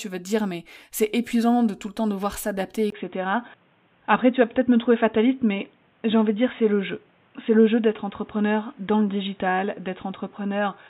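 A speech clip that turns dull and boxy at 2.90 s, just after "le temps devoir s'adapter", with a brief 20 ms gap, nothing above 3.8 kHz afterwards, and a faint new noise floor far below the speech at unchanged loudness, likely an input switched to a poorer device.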